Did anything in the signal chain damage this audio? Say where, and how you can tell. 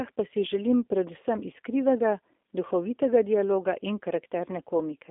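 Yes, at the codec stage, for the whole clip. The speech sits between 250 Hz and 3.6 kHz and sounds plainly rough and synthetic. That is the G.729 codec, which fits an 8 kbit/s stream. It models each 10 ms frame with a tract filter, pitch predictor and sparse pulses.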